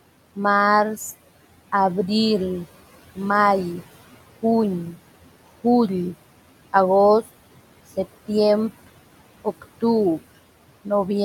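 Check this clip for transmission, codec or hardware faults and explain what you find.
One processing fault runs through the whole recording: noise suppression that audibly pumps the background.

Noise suppressor artifacts, present throughout. The suppressor estimates which frequency bands hold only steady background noise and turns them down frame by frame, here by about 17 dB. The room noise, sitting about 16 dB below the speech, is therefore pulled down in the pauses, then comes back up underneath each stretch of speech as the suppressor backs off. The result is a background that breathes in step with the talking rather than staying level.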